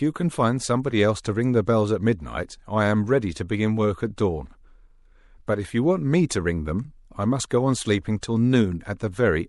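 Across the whole speech clip, the audio carries plainly audible damage of the kind MP3 compression likely leaves at a bitrate around 64 kbps: weak frequency detail flickers between frames into a watery swirl, and sibilants pick up metallic chirps.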